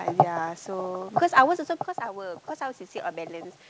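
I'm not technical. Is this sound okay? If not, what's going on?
No. From about 1.98 s to the end of the clip there is automatic gain rising. Shortly before that, around one and a half seconds in, the talker moved back from the microphone and the speech became noticeably quieter. The call's automatic volume control responded by gradually turning itself up, so from about 2 s onward the speech and the room noise behind it grow louder together, swelling steadily instead of staying at an even level.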